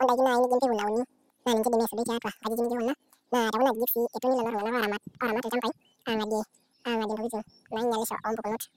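From start to finish the speech has been read two samples at a time, so the audio plays at double speed: each pair of samples was taken as one frame. Everything runs twice as fast and a full octave higher.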